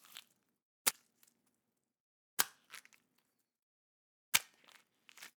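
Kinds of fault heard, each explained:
Damaged data in a compressed stream: corrupt bytes make the decoder misread frames and resync, leaving brief glitches at 0.91 and 2.95 s.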